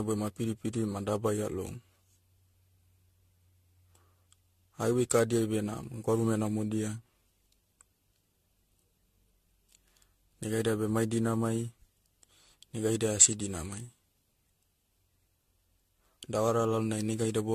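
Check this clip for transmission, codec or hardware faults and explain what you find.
One codec fault runs through the whole speech recording. Throughout, there is generation loss: the speech sounds swirly, hollow and smeared, with blurred consonant attacks. The cause is likely around seven successive AAC-LC re-encodes at about 64 kbit/s, each quantising on a shifted frame grid so the errors stack. A spectrogram shows a hard ceiling at 14.4 kHz, patchy spectral holes and smeared transients.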